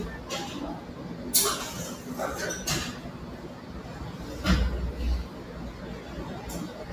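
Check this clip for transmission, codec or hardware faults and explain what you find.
One fault stands out: from 3.44 to 3.70 s, the sound is cut by the noise suppressor. It misjudged this passage as background noise and attenuated it, pulling the level down by up to about 4 dB for roughly a fifth of a second, so the sound briefly sinks.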